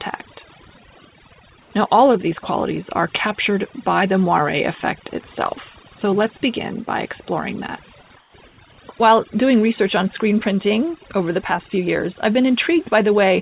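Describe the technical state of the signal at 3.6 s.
At 3.6 s the speech is affected by overdone noise removal, which runs through the whole clip. The noise reduction is set too strong. Any frequency band near its noise estimate is pushed far down or switched off. Quiet parts of the speech are removed with the noise. The background drops and breaks up into twinkling specks. The call path cuts everything above 4 kHz, which fits a G.711 mu-law codec.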